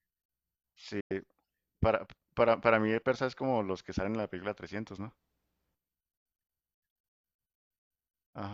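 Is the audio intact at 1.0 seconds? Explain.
No. A digital broadcast dropout runs from 1.00 to 1.11 s. The receiver lost valid frames and muted until good ones returned. The speech fades out over about 8 ms, leaving a silent hole of about 96 ms. That stretch of sound is gone.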